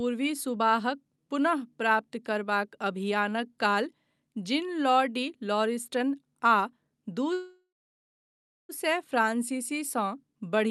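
At 7.33 s the speech freezes into a brief fading buzz, then silence until 8.72 s: a call audio freeze, likely packets stalling and draining the jitter buffer.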